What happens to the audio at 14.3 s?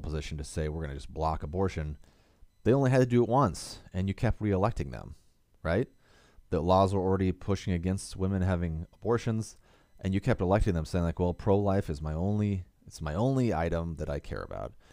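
Nothing goes wrong at 14.3 s; the speech carries on intact through that moment with no dropout, click or distortion.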